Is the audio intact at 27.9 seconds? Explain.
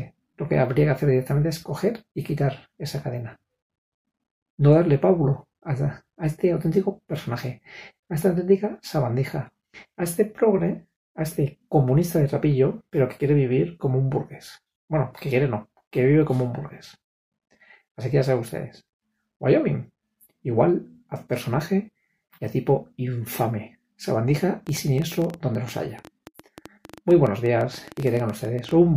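No, a train of clicks runs from 24.67 to 28.72 s. Likely outside interference injects roughly ten unevenly spaced pops per second, sitting above the sound itself.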